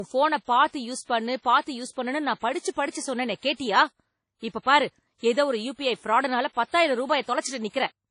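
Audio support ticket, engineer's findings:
Speech throughout: ringing, washy smear around onsets, hiss that swells and fades with level, nothing above 10.1 kHz. Likely WMA compression, early WMA version. Long transform blocks spread quantisation noise and drop weak components, which fits a low bitrate near 32 kbps.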